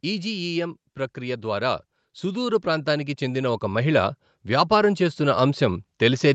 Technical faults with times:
1.14-6.34 automatic gain rising

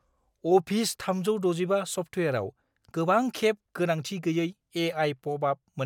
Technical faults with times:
none

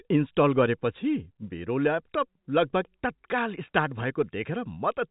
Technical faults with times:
none

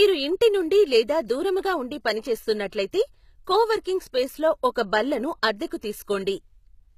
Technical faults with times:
0.00-6.98 HE-AAC compression

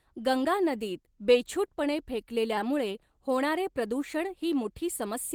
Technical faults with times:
2.57-2.59 skip ahead
4.46-5.34 jitter buffer speed-up

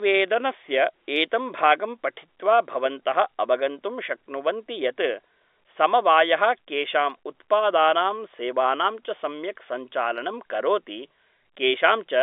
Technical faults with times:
none

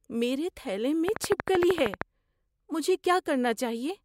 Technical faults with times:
1.08-2.02 train of clicks

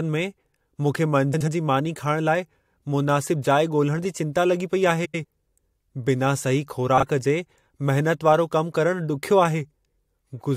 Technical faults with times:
1.34-1.48 frames out of order
5.05-5.25 frames out of order
6.97-7.03 frames out of order

